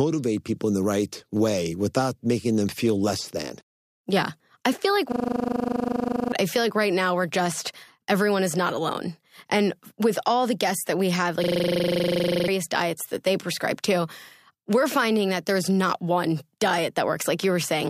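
At 5.12 s, right after "I feel like", a system hang loop takes over until 6.32 s. A single 40 ms slice of audio repeats exactly 30 times, producing a rough, steady buzz at 25 Hz while the sound hardware keeps cycling the same ring buffer during a stall. It recurs from 11.44 s to 12.48 s after "guests that we have", with 26 repeats. Each hang drops about a second of audio, so playback resumes at "I feel like right" and "diets that they prescribe".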